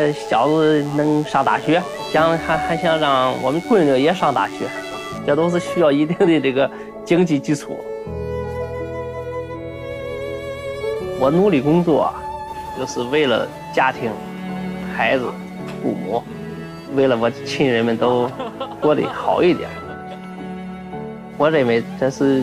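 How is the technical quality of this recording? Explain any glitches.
There's one problem at the start. From 0 to about 5.2 s you get DECT cordless phone buzz: a nearby DECT handset or base fires a radio burst every 10 ms, the audio circuitry rectifies it, and you hear a steady, thin 100 Hz buzz full of harmonics, sitting roughly 25 dB under the main sound.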